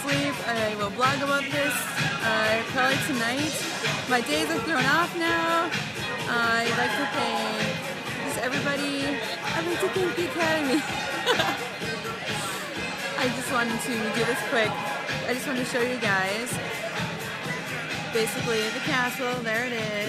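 A click recurs every 1.0 s from 0.49 s to 19.41 s, about twenty in total. The likely cause is clock drift buffer slips: two clocks differing by roughly 200 parts per million let the buffer creep until a handful of samples is dropped or repeated.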